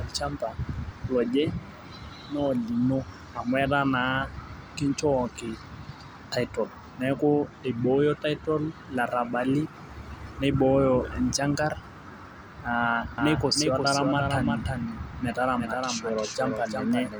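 A second capture path or an out-of-step edit has likely mixed the speech in twice, producing a doubled audio track from 13.18 s to the end. A dry, full-band copy about 400 ms behind and roughly 5 dB quieter cuts in abruptly, smearing every syllable into a hard echo.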